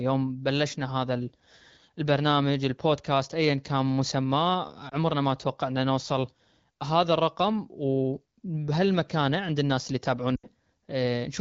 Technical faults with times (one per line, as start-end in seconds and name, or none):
4.89-4.94 lost AMR speech frames
10.35-10.47 lost AMR speech frames